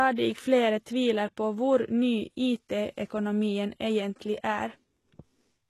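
Throughout, the speech carries gritty, lispy sibilants from heavy HE-AAC compression at likely a very low bitrate. Its spectrogram shows smeared, copied-looking treble and nothing above 12.3 kHz.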